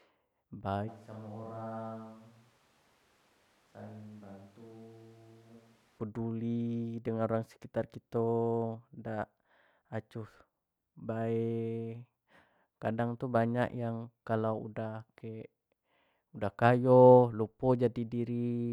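From 0.90 to 5.98 s the speech suddenly goes roomy and hollow, drops by about 10 dB with thinner bass, and picks up room noise only some 25 dB under it. That's most likely a switch to a distant microphone, snapping back before "peduli dengan orang sekitar".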